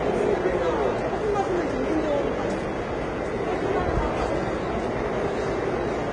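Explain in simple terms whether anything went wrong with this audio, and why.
Transcoding between lossy codecs runs through the whole clip, from start to finish. The sound seems to have been squeezed by one compression format and then squeezed again by another, likely HE-AAC followed by Vorbis. The second pass treats the first one's damage as real sound, so both sets of artefacts pile up together. Everything above about 10.5 kHz is missing, which leaves the audio dull and muffled.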